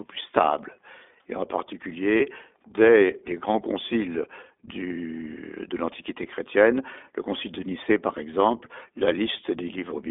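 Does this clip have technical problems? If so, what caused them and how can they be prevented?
Yes. The iLBC codec colours the whole clip. The speech sits in a narrow band from about 250 Hz to 3.6 kHz, and the voice has a slightly rough, synthetic edge. That comes from iLBC coding each 20 ms frame's excitation on its own at a low rate, which fits its 15.2 kbps mode. Everything above 3.6 kHz is gone, so sibilants and air are dull. To prevent this, use a wideband codec such as Opus at a higher bitrate wherever both ends support it.

Lost iLBC frames occur from 2.18 to 2.22 s, just before "dès les grands conciles". For that brief moment the voice turns into a held, faintly buzzy sound. The decoder had no data, so it repeated the last pitch cycle blended with noise to fill the hole. The gap points to a single lost 20 ms frame. Because each iLBC frame decodes independently, the speech is clean again immediately after. 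To prevent this, reduce packet loss on the network path with QoS prioritisation, a wired link or forward error correction.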